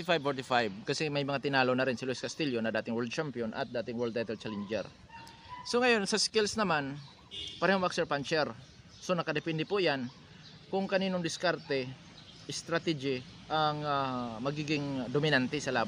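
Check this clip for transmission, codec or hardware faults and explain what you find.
Nothing in the signal points to a transmission, codec or hardware problem, and no fault is audible anywhere in the clip.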